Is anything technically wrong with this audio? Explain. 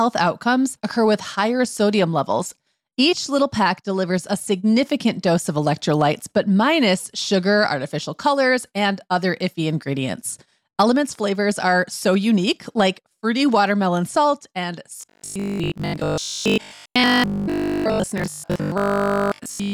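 Yes, there's robotic sound from repeated short buffers starting at 14.98 s, right after "fruity watermelon salt and", and it runs to the end of the clip. The speech turns into a stiff, metallic buzz locked at 50 Hz that still loosely tracks the words. That's likely from audio arriving too slowly, so the player keeps looping the last chunk while most of the real signal gets skipped. A 50 Hz buzz fits a loop about 20 ms long.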